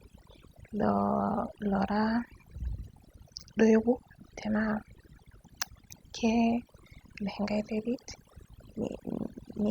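Overdone noise removal runs throughout this speech. Aggressive noise reduction shuts down quiet frequency bands, leaving twinkling specks in near-silence and taking quiet parts of the voice with them.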